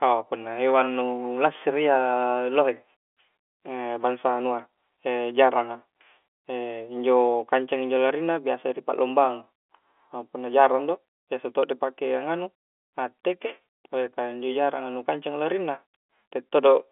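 No faults can be heard anywhere in this audio.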